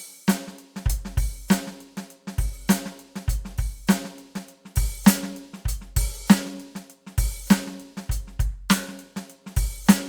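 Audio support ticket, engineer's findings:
No faults found in this music clip; nothing to report in the engineer's findings.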